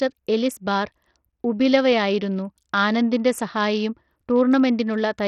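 From start to finish the speech is gritty, treble flickering and nothing above 16.8 kHz, likely Bluetooth SBC compression starved of bits at a low bitrate.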